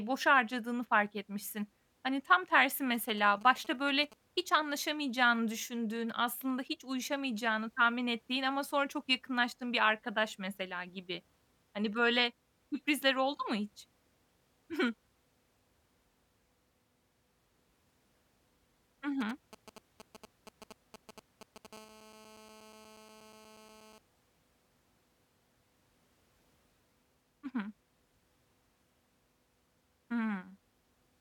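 Speech, with two kinds of radio interference from a 2G handset somewhere near the recording chain. GSM signalling bursts show up twice, from 2.94 to 4.14 s and again from 19.21 to 21.67 s, as that galloping dit-dit-dit of ticks and short buzzes. That's the phone waking up to talk to the network, and the audio circuit rectifying each group of radio pulses into sound. The first patch sits about 20 dB under the speech, the second somewhat louder at around 15 dB down. Right after the second patch, from 21.73 to 23.98 s, it turns into full GSM phone buzz: a steady, hard, raspy 217 Hz tone with plenty of harmonics, about 24 dB below the speech and unrelated to it. The steadiness points to the handset holding a call, transmitting its bursts 217 times a second the whole time.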